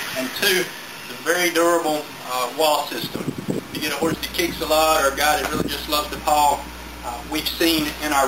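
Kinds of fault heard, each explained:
Mains hum: A steady low tone at 60 Hz comes in at 4.12 s and runs to the end. It sits roughly 15 dB below the sound. Power-line current is leaking into the signal, likely through a ground loop or a nearby transformer.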